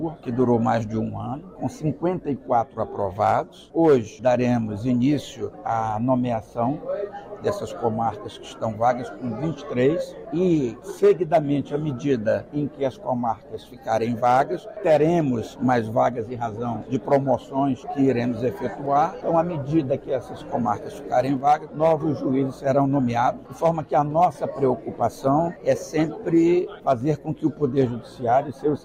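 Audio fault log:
No fault is heard in this audio.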